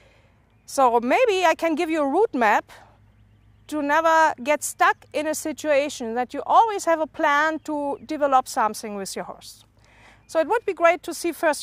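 No technical faults can be heard at any point in the audio.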